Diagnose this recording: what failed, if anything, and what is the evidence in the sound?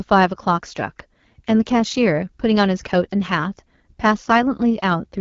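The codec stage is at fault: this speech carries AMR wideband (HD Voice) coding for its whole length. It sounds rough and raspy and stops dead around 7.4 kHz, which fits one of the low AMR-WB rates, near 8.85 kbit/s, where the pulse model is too coarse.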